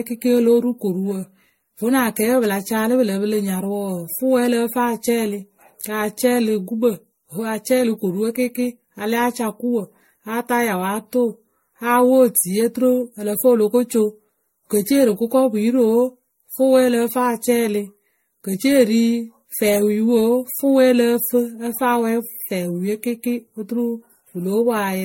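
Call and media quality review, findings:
Speech swirly, smeared and hollow throughout; attacks blurred, nothing above 16.7 kHz. Likely generation loss: repeated MP3 re-encoding, around seven passes, fits a 64 kbit/s chain. Each pass requantises on a shifted frame grid, stacking noise and spectral holes.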